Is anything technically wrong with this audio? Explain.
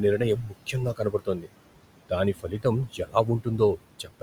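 Yes. Two related faults come from the noise suppressor.

Noise suppressor artifacts run through the whole clip. The suppressor lowers each band it judges to be steady noise, frame by frame. The room noise, about 16 dB below the speech, drops by about 18 dB in the gaps and comes back up under the speech.

Speech cut by the noise suppressor happens five times: 0.18–0.55 s, 0.94–1.5 s, 2.35–2.65 s, 2.88–3.15 s, and 3.99 s to the end. The suppressor mistook parts of the speech for noise. Those parts drop by about 11, 18, 15, 15 and 12 dB. They sound swallowed or faint.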